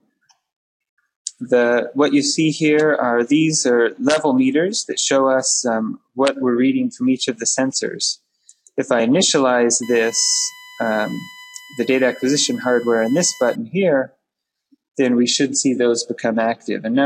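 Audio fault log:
9.83–13.55 s USB whine: a fixed-pitch whine built on 1 kHz, strongest at 2 kHz, about 20 dB below the sound, from the bus's 1 ms current frames leaking through power or ground.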